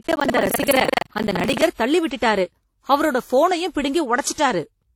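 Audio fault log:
throughout: transcoding between lossy codecs. Layered codec artefacts heard together in the speech with the lowest cut-off in the chain kept, likely from stacked encodes; the layered artefacts fit WMA followed by HE-AAC.
0.00–1.63 s: buffer tearing. A rattling 23.4 Hz buzz under the speech as roughly a third of each buffer replays audio from about 150 ms earlier, fitting a 2048-sample buffer.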